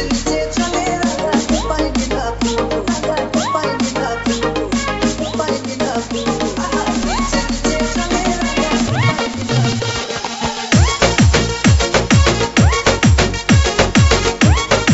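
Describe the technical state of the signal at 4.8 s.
At 4.8 s the signal is intact, with no dropout, glitch or distortion, only the steady band limit at 8 kHz expected of a wideband call path like G.722.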